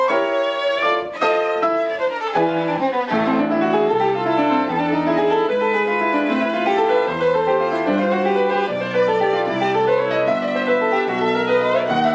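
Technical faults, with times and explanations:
No technical faults are heard in this clip.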